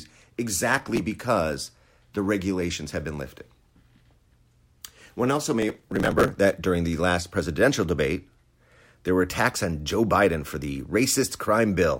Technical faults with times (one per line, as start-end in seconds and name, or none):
0.78-1.00 processor overload crackle
5.62-6.38 processor overload crackle